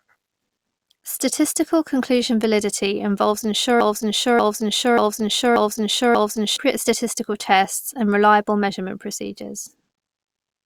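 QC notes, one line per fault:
3.81–6.56 s, broken-record loop: a stalled player or stream likely kept resending its last held buffer, so a 0.59 s fragment repeats exactly five times back to back after "conclusion validity involves". The audio that belonged there is lost before "statistical tests and reliable".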